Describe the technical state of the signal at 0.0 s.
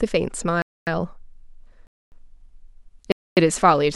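At 0.0 s the speech signal is intact, with no audible technical fault.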